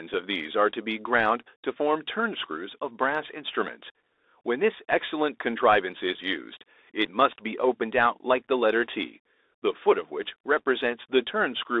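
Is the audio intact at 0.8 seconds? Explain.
No. At 0.8 s the Bluetooth CVSD headset codec is at work, as throughout. Its one-bit, 64 kbps adaptive delta coding confines speech to 300 Hz–3.7 kHz, adding scratchy sibilants and granular hiss; a spectrogram shows nothing above 3.7 kHz over a speckled floor.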